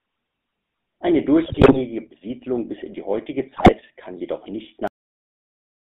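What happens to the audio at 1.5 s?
Corrupted bits reached the speech decoder from 1.44 to 1.78 s. These are GSM bit errors, and the damaged filter, pitch and gain values turn the speech into squawks, pops and gargling. Throughout, the GSM full-rate codec's pulse-driven vocal-tract model adds a buzzy, gravelly roughness, and the line band stops near 3.6 kHz.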